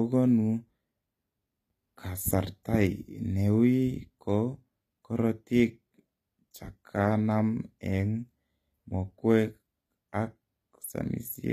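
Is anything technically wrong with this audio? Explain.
Yes. Plainly audible codec damage runs through the whole speech clip, and the likely cause is HE-AAC compression. Nothing is present above about 14.9 kHz, and the treble sounds synthetic rather than captured. Its character points to a low bitrate, around 24 kbps. At that rate the codec spends its bits on the lower spectrum and fills the top by copying lower bands upward under a coarse envelope. The copied harmonics don't align with the real ones, so sibilants come out gritty, metallic or lispy.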